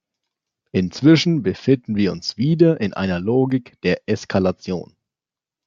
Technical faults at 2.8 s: none

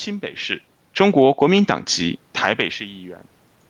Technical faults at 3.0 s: none

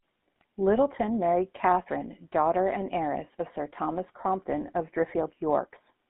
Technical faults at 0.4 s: GSM full-rate codec; GSM bit errors

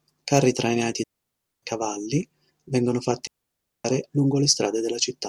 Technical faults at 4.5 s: none

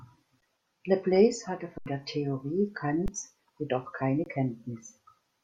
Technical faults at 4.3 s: underrun with held sample

